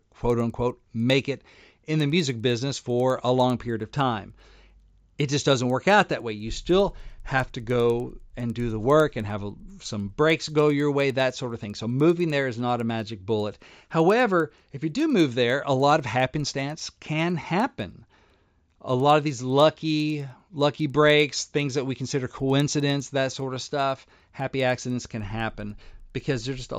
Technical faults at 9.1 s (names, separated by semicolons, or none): resampler restarted on every block